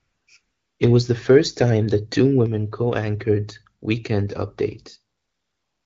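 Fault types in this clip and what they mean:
AMR comfort noise: during pauses the handset stopped sending speech frames and the receiver filled the gap with synthetic noise built from a coarse level and spectrum estimate, heard as a smooth, steady hiss replacing the real background from 0 to 0.27 s, 0.41 to 0.79 s and 5.17 to 5.85 s.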